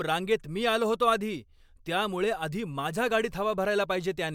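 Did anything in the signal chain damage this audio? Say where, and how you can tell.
No, nothing in the signal chain damaged this speech.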